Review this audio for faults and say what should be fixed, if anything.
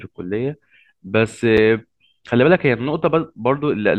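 At 1.57 s, a block of digital silence zeroes the speech for 5.3 ms, fitting a 256-sample buffer; the hard edges tick rather than fade. Fix it by giving the audio thread enough buffer headroom or priority so every output block is filled before its deadline.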